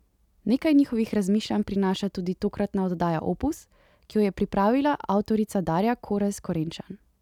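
Nothing in the recording stood out as a technical problem on listening.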